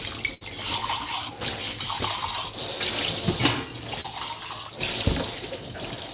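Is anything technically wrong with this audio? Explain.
Yes, there are two packet-loss faults in this audio, which is carried over a call link whose narrowband coding leaves nothing above 4 kHz.

From 0.34 to 0.43 s there is a burst of packet loss. Several consecutive packets failed to arrive in time, so the receiver kept extending the last received sound for about 68 ms and faded it as the gap grew. This is heard as a held, decaying buzz or hiss. When the real audio returns, roughly 60 ms of the original sound is simply gone.

At 4.01 to 4.06 s there is a short concealed packet loss. A brief stretch of data missed the decoder's deadline, and about 32 ms of synthesised continuation, drawn from the preceding pitch or noise shape, stood in for about 40 ms of lost material before crossfading back. The result is a quick smear or flutter in the sound, where a brief transient can disappear entirely.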